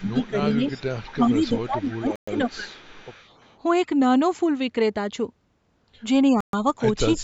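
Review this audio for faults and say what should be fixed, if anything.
Speech suppressed in double talk occurs at 0.0 to 0.65 s, 1.14 to 2.78 s and again at the very end, 7.17 to 7.24 s. The level dips by about 15 dB in the first stretch and about 20 dB in the later two, with roughly a third of a second affected first and about a second in the middle. This is likely the echo canceller failing to separate the near talker from loudspeaker echo while both sides spoke, and attenuating everything. Prevention: tune the canceller's double-talk detector so it holds near-end speech rather than ducking it.

Echo leak runs from 0.06 to 1.15 s and from 1.48 to 3.58 s. A delayed copy of the speech trails the original by 341 ms, about 20 dB below it in the first span and about 25 dB below in the second. The likely cause is a far end on loudspeaker whose echo canceller left residual pickup, which was then sent back down the line. 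Prevention: improve far-end echo cancellation or have that side use a headset.

Bluetooth stall produces two short cuts to silence, at 2.16 s lasting 118 ms and at 6.41 s lasting 127 ms, after which the sound resumes. This is likely interference delaying packets until the headphone buffer ran empty, pausing playback until retransmissions arrived. The first stall falls inside the middle suppression stretch, compounding that dropout. Prevention: reduce radio interference and distance between phone and headphones, or allow a larger playback buffer.

The call microphone processing band-limits the audio, with nothing above 8 kHz, which is expected for this path.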